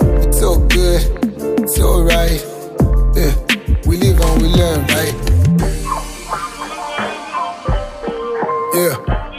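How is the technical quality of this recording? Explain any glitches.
The recording has one glitch. At 2.39 s the sound jumps ahead slightly. This is likely a dropped buffer (overrun). The hardware overwrote samples before the software read them. A very brief piece, around a millisecond or two, vanished. The two sides were joined with no silence between them.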